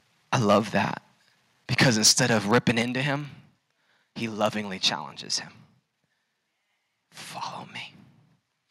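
A filter restarted on every block runs through the whole clip. Each block begins from silence and leaves a small transient, so a buzz of ticks at 21.5 Hz follows the speech level. That rate fits a 2048-sample block.

Microphone overload comes first from 0.33 to 0.78 s, with peaks about 5 dB past the converter's limit. A harsh, crackling edge sits on the loudest syllables, likely because the converter cut the tops off roughly two percent of samples. The overload returns from 1.78 to 2.82 s at about 8 dB over, with around three percent of samples flattened, and the distortion is rougher.

Inside that stretch, at 1.83 s, the microphone volume stepped down by about 4 dB. Speech and background drop together in one sudden step, likely as the input gain is pulled back. A second step of about 6 dB follows at 2.83 s, right as the clipping ends.

A brief microphone overload from 4.44 to 4.46 s, about 2 dB over, adds a short crackle. 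At 4.62 s the level drops by a final step of about 2 dB.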